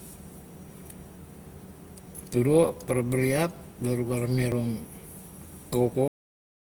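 Opus compression runs through the whole of this speech clip, plainly audible as a grainy, rough, noisy texture where clean tones should be. The likely cause is an Opus encoder in its music (CELT) mode at a rate around 24 kbps. CELT keeps each band's energy but fills bands it cannot afford to code with folded or noise-like content. The full bandwidth survives, with content reaching about 20.2 kHz, so the damage shows as coarse texture rather than muffling.

Dropped buffers (overrun) occur at 0.32, 1.52, 2.88, 4.52 and 5.92 s. At each point the speech jumps forward with no gap of silence. About 40 ms goes missing at four of them and about a tenth of a second at 1.52 s. The likely cause is the capturing program falling behind, so the hardware overwrote samples before they were collected, and the audio on either side of each lost stretch was spliced directly together.

The clip has a cut-off end at 6.08 s, where the speech stops mid-sound and falls straight to silence with no natural decay for the remaining 0.6 s. 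The final buffers were never written out, so the sound ends abruptly instead of trailing off.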